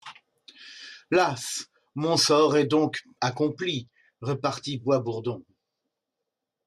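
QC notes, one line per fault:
No faults heard anywhere in this speech recording.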